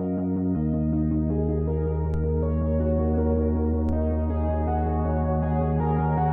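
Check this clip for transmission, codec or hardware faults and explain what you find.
Two DC steps are audible, at 2.14 s and 3.89 s. Each time the waveform's zero line jumps by about -26 dBFS and then bleeds away through a roughly 2 Hz high-pass, producing a dull low thump. Unlike a dropout or sample glitch, the sound itself carries on intact.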